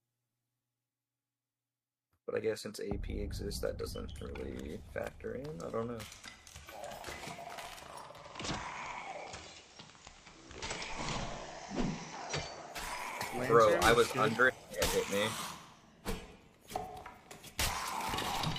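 At 8.08 s the audio cross-fades over about 284 ms into a hissier version of itself. That is digital radio blending to analogue: the receiver lost the digital stream and fell back to the FM broadcast of the same station. On the FM side a hiss floor sits roughly 25 dB below the signal. The level shifts by about 1 dB. At 12.91 s the radio blends back to digital.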